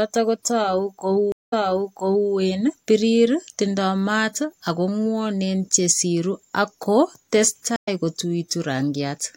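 Stream reconnects at 1.32 s and 7.76 s: the connection dropped and a fresh decoder restarted. First 0.2 s of silence, then 0.78 s of speech replays; later a 0.11 s gap jumps slightly ahead.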